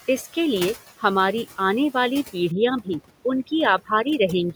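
Throughout the clip, a noise suppressor judges the steady background frame by frame and pulls those bands down by about 18 dB. These are noise suppressor artifacts: the room noise dips between phrases and swells back under the speech.

The same suppressor mistakes parts of the speech for noise and cuts them with the background, at 0.27 to 0.37 s, 0.74 to 1.04 s, 1.45 to 1.59 s and 2.24 to 2.35 s, with drops of about 12, 17, 14 and 15 dB. In this speech cut by the noise suppressor, syllables sound swallowed or fade out briefly.

From 2.52 s to the end, where the room noise rises sharply, overdone noise removal sets in. The processing clamps individual frequency bands nearly shut whenever they sit near its noise estimate. The background drops away and breaks up into twinkling specks.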